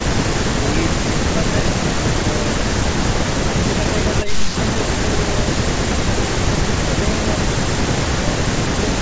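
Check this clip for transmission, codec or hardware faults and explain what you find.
Nothing stood out on listening to this speech clip, which has the ordinary sound of call microphone processing, with the lowest bass trimmed and nothing above 8 kHz.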